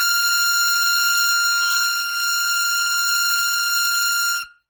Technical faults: generation loss

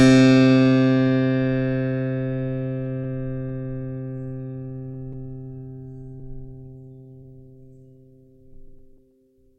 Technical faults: clock drift between sender and receiver; repeated timing corrections; scattered short gaps

